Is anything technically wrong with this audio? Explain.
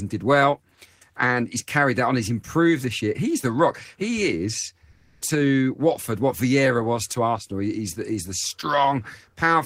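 Yes, two faults are audible in this speech clip.

From 4.91 to 5.21 s, comfort noise replaces the background. Likely Opus DTX silence handling fills those 300 ms with steady synthetic hiss in place of a background about 48 dB below the loudest speech, shifted in level by about 3 dB. On a spectrogram it shows as a smooth, featureless band.

From 7.39 to 7.50 s, just after "was to", there is a sudden gain jump. Speech and background drop together by about 8 dB, most likely from an unramped gain change. The waveform envelope shows an abrupt step.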